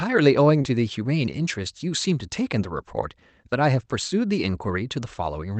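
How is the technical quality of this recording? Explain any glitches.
The recording has one audible glitch: a short concealed packet loss at about 0.61 to 0.65 s. The sound comes through a call codec whose content stops near 8 kHz, which points to Opus in wideband mode.

At 0.61 s, about 20 ms of audio never reached the decoder in time. The receiver filled the gap by extending the preceding sound, repeating its pitch if voiced or generating shaped noise if not, then cross-faded back into the real signal by 0.65 s. It is heard as a brief smear or wobble.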